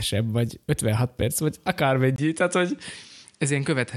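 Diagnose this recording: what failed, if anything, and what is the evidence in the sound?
At 2.16 s, right after "perc vagy", the capture path changes character: a gap of about 20 ms, then the sound continues about 5 dB quieter, with nothing above 10.5 kHz and a new noise floor roughly 40 dB below the signal, lasting to the end. The failure sits at the driver or device-selection stage, likely an input switched to a poorer device mid-recording, whose narrower band, lower gain and own self-noise replace the original microphone's.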